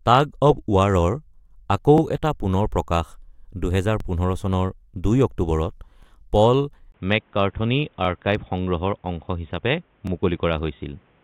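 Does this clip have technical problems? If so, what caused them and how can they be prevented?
Yes. Overlapping chunks occur at 1.98, 4.00, 6.03, 8.05 and 10.07 s. The speech was handled in 2-second chunks that each began about 23 ms early, so that sliver repeats as a brief stutter at every join. Aligning chunk boundaries exactly, or crossfading and trimming any overlap, prevents it.

Input switched to a poorer device at 6.92 s. After a 20 ms gap, the speech stays at much the same level but loses everything above 3.8 kHz and gains a faint new noise floor, most likely because recording moved to a narrower-band microphone or headset profile. Locking the input device for the whole session, and disabling automatic switching, prevents it.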